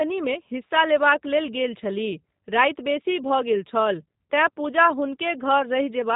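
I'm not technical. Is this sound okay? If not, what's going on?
No. The whole recording has passed through the G.729 codec, a squeezed format used for internet phone calls. It rebuilds the speech from a rough model of the voice, so the speech stays understandable but sounds plainly rough and slightly artificial. Nothing above about 3.8 kHz survives, which makes it sound muffled. A simple muffled recording would lose the brightness but still sound natural; here the voice itself sounds synthetic.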